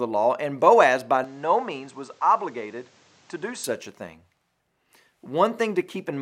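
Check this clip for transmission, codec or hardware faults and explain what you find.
One fault is present. From 1.24 s to 3.64 s, just before "a thing", the speech turns duller, with nothing above 8.5 kHz and faint new background noise, at unchanged level and with no gap. This is likely an input switched to a poorer device, whose narrower band and own noise replace the original microphone's until it switches back.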